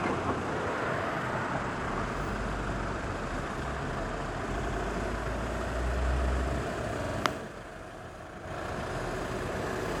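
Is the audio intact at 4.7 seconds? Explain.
No. Repeated frames occur from 4.58 to 4.76 s. A 92.9 ms stretch of compressed audio, which fits two frames, was played twice more. The decoder repeats it, so the sound stutters, and the clip grows by 185.8 ms.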